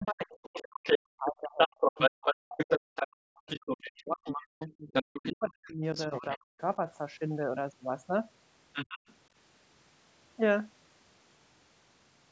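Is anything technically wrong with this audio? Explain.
Yes. Speech suppressed in double talk runs from 0.0 to 6.61 s. The echo canceller likely could not separate the talker from the loudspeaker echo, so it ducked both. The voice dips by up to about 40 dB across roughly five seconds.

The other side's voice leaks through at 0.05–3.08, 3.48–5.33, 5.7–6.38 and 8.73–9.15 s. Echo the canceller likely left behind comes in at levels from somewhat above the talker, through roughly level, down to well below.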